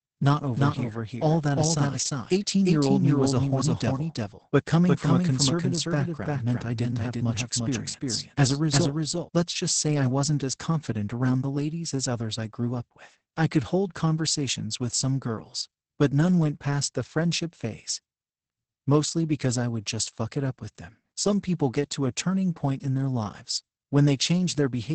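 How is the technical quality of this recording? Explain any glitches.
Pretty rough, to be honest. There's heavy low-rate compression all the way through, and a doubled track over the first third.

The Opus voice compression runs the whole clip. Nothing sits above about 8.8 kHz, and the speech comes out muffled, hoarse and a bit robotic. That points to SILK in wideband mode at something like 10 kbps, coding the excitation very coarsely.

The doubled audio track runs from 0.57 s to 9.29 s. A second full-band copy trails the original by roughly 0.4 s and sits a few dB quieter. It's dry, with no decay or room colour, and it cuts in and out abruptly. The likely cause is the audio being captured a second time through a slower path.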